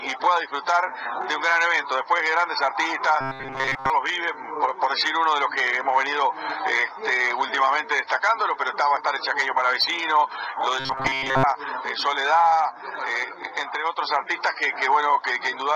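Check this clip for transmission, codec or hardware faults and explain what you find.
Two faults are present, both robotic sound from repeated short buffers. From 3.21 to 3.90 s and 10.80 to 11.44 s, the sound turns into a rigid, metallic 133 Hz buzz. This is likely a 7.5 ms segment replayed over most of each stretch while the real audio is skipped.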